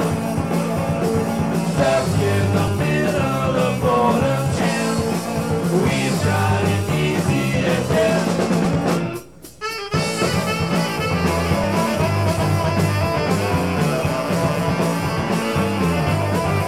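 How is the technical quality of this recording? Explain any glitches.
There is one audible glitch. At 2.68 s a brief skip occurs: roughly 15 ms of audio vanishes and the surrounding sound is butted together with no gap. This is likely audio missing between chunks, where processing in 3-second blocks drops a sliver at a block boundary.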